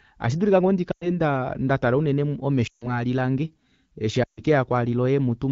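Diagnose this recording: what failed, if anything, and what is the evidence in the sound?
Lost AMR speech frames, a network fault, at 0.92–1.09 s after "ashidulike ngoo", 2.67–3.03 s after "ndaa ndatala unene" and 4.23–4.43 s after "lange eshi". Radio errors corrupted the frames, so the decoder held the last pitch and vocal tract settings with falling gain, dropping the sound to near silence within two frames.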